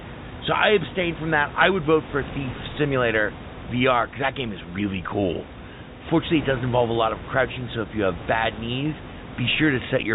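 Speech carried over a G.711 A-law telephone channel at 64 kbps, with room noise sitting about 14 dB below the speech, and no technical faults present.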